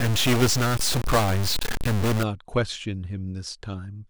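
From the start to 2.23 s, the speech carries a harsh, buzzy distortion that then stops. A stuck bit is the likely cause. One bit of each sample seems pinned at a fixed value. About half the samples are pushed off by that bit's weight, which here is about -20 dBFS, a fairly high bit. The error follows the waveform, so it grates on the speech. Quiet gaps fill with a loud, rough noise.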